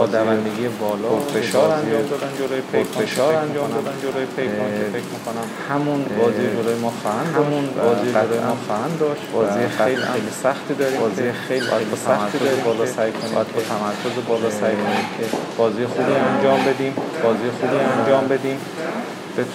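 Throughout, every sound returns about a second and a half later at roughly equal loudness, dry and full-band: a doubled audio track, likely from a second, slower capture path.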